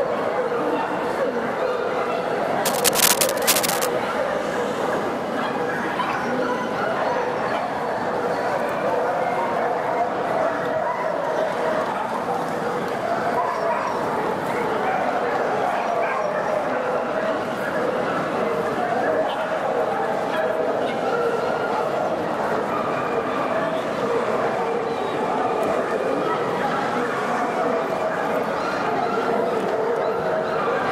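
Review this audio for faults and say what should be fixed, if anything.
Cable scratch noise, 2.65 to 3.85 s: dense, uneven scratching bursts roughly as loud as the sound itself, likely from a worn cable or connector whose contact resistance fluctuated as it moved. Replace or reseat suspect leads and fix cables in place so they cannot shift during recording.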